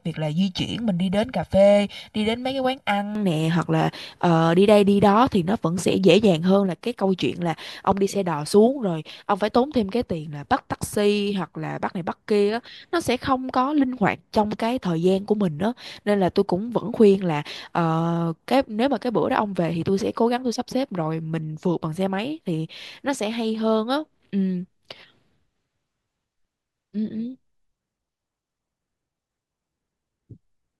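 For the first 3.15 s, from 0.0 s, the speech sounds hollow and phasey, thinned out as if heard through a tube, with parts of the spectrum scooped away at fixed, evenly spaced points. This is channel delay (comb filtering): one channel arrives roughly one and a half milliseconds late, and when the two are summed to mono, the shared content cancels at regular intervals, starting somewhere around 400 Hz and repeating above it.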